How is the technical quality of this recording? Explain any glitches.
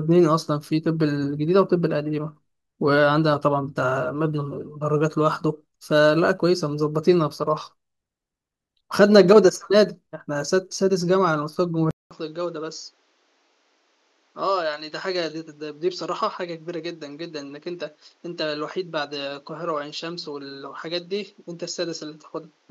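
The recording has one clear fault. At 11.91 s the input was likely switched to a poorer device: after a 200 ms silence, the sound narrows to nothing above 7.6 kHz, turning duller, drops roughly 10 dB in level, and gains a new noise floor about 35 dB down, to the end.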